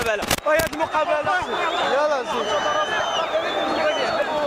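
No technical faults are audible.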